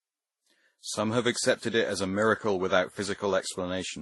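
A short speech clip with transcoding between lossy codecs running the whole way through. Nothing comes through above about 11.8 kHz, and the sound carries layered artefacts that don't share one character, which fits WMA at around 48 kbit/s, then Vorbis near 29 kbit/s, and finally MP3 at about 47 kbit/s. The likely story is that each pass wasted bits encoding the previous one's damage and stacked its own on top.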